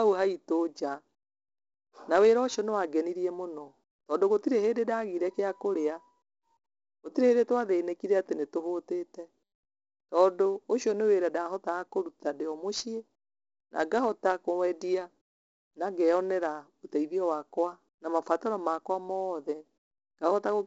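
From start to finish, the speech carries heavy 4-bit ADPCM compression: each sample is coded as a coarse step from a prediction, so a gritty hiss rides every loud syllable and sharp attacks smear. Nothing above 7.8 kHz, which fits a 16 kHz, 64 kbps stream.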